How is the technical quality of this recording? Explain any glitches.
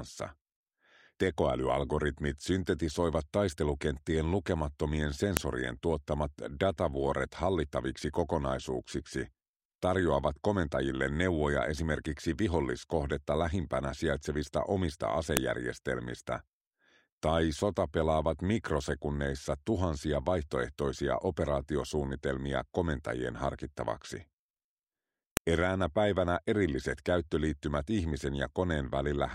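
The recording has one recurring fault: a file header played as audio. Sharp, loud clicks occur at 5.37, 15.37 and 25.37 s, every 10 seconds. Separate WAV pieces were joined with their headers left in. Those header bytes play as samples, producing a snap regardless of the sound underneath.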